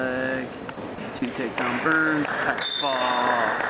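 Short 30 ms patches of steady hiss replace the sound at 0.74, 0.95 and 1.19 s before it resumes. This is sound dropped by the voice detector: the sender likely classed that audio as background and stopped sending, and the receiver filled the gaps with comfort noise.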